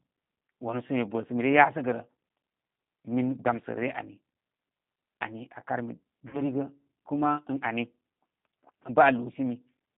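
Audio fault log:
throughout: G.729 codec. The speech is being rebuilt from a vocal-tract filter, a pitch predictor and a handful of pulses per frame, at a rate that fits an 8 kbit/s stream. Nothing survives below about 150 Hz or above 3.6 kHz, and the resynthesis leaves the voice plainly rough and synthetic.
3.56–3.60 s and 6.29–6.42 s: VoIP packet loss concealed by the speech codec. The decoder lost its input, about 20 ms and then 40 ms, which fits one and then two lost packets. It filled each gap by extending the last pitch and filter at falling gain, so the voice turns briefly into a buzzy tone or coloured noise that fades. Because each frame builds on the previous one, the distortion outlasts the gap.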